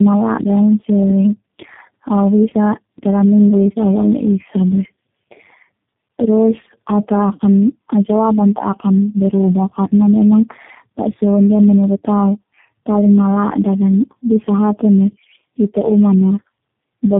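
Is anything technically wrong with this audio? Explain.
Yes. Tandem speech coding runs through the whole clip. The speech was squeezed through one low-rate speech codec after another, with plain telephone-grade links between them. The sound points to three such coders in a row, each re-encoding what the previous one had already degraded. The errors stack, so the speech sounds rough, muffled and warbly, worse than any single codec would leave it, and nothing is heard above 3.7 kHz.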